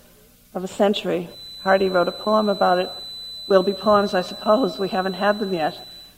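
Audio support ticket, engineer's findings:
Feedback whistle from 1.24 s to end. Thin 4 kHz tone, slowly swelling and fading, about 15 dB below the sound. Likely speaker-to-mic loop sitting at the feedback threshold.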